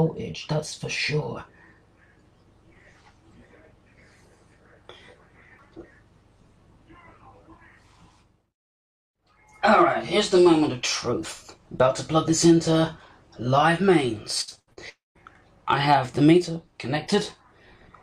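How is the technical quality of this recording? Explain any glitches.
The recording has two network-related glitches, both close together near the end, between about 14.4 and 15.2 s.

From 14.41 to 14.79 s there is repeated packet loss (robotic sound). Five short gaps follow one another, the longest about 80 ms, and each is patched by stretching the preceding sound. Concealment covers roughly 58 percent of that span, so the audio turns choppy. It differs from a single dropout because the holes are brief and recurring, with real audio flickering through between them.

At 14.89 to 15.17 s the audio stops for about 260 ms. A short buzzy continuation of the last sound fades out, and then about 160 ms of near-silence follows before the signal resumes with that portion gone. This is likely a long network dropout. Unlike the choppy stretch just before it, it is one sustained gap, and concealment gives up, so the result is a hole rather than a warble.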